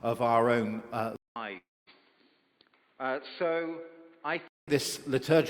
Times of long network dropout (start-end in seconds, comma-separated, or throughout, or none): 1.57-1.90